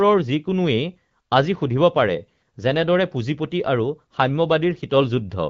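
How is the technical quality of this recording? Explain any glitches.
Nothing stood out on listening to this speech, which has the band-limited sound of an AMR wideband (HD Voice) call, consistent with a mid rate of around 12.65 kbit/s.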